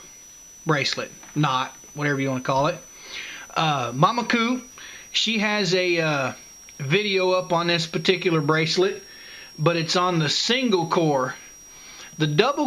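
A switching supply whistle runs throughout: a thin tone drifting between 5.6 and 6.0 kHz, about 25 dB down, visible as a wavering horizontal line across the spectrogram.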